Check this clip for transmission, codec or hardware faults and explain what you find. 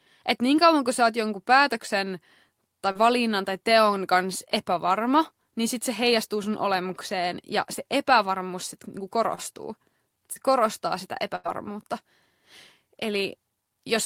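Two kinds of transmission fault affect this speech clip, both from audio that failed to arrive in time for the receiver to play it.

Short concealed packet loss occurs three times: 2.91 to 2.97 s, 9.35 to 9.53 s, and 10.33 to 10.38 s. Each time, a few tens of milliseconds of the stream went missing: about 40 ms in the first case and 20 ms in the others. The decoder covered each hole by extending the preceding sound for 24 to 36 ms before blending back into the real signal. At 9.35 s, the receiver also trimmed about 8 ms to realign playback. Each event sounds like a brief smear or wobble.

A burst of packet loss occurs from 11.36 to 11.47 s. Here, about 100 ms failed to arrive in a row, far too much to cover invisibly. The receiver carried the last sound forward for roughly 94 ms while fading it down, producing a held buzz or dying hiss. The speech then resumes further along, with the material in between simply gone.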